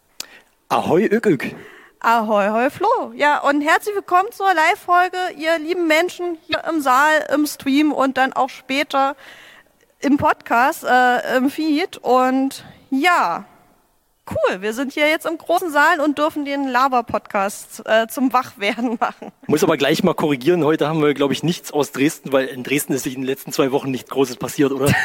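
At 6.49 s, 15.54 s and 22.98 s there are short bursts of damaged data in a compressed stream. Each lasts well under a tenth of a second, from about 52 ms to 76 ms. Bytes in the stream are wrong at those points. The decoder misreads the frames, loses sync and hunts for the next valid frame header. Each one is heard as a brief chirp, squawk, click or short hole that breaks through the sound.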